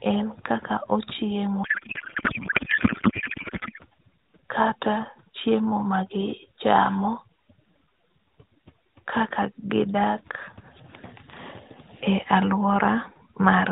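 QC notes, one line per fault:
Throughout: overdone noise removal; background dropped and broken up into twinkling specks, spectrogram shows patchy holes where weak bands were gated out.
1.64–3.79 s: codec payload misread; octet-aligned AMR frames decoded as bandwidth-efficient, so speech turns to garbled warble, spectrogram smeared noise unrelated to surrounding formants.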